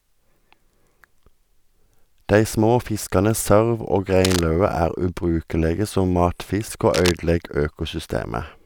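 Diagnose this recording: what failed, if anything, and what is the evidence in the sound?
Analogue wiring: a worn cable or connector likely moved, causing cable scratch noise, with rustling bursts nearly as loud as the speech at 4.25–4.41 s, after "små fiskane sørv og", and at 6.94–7.11 s.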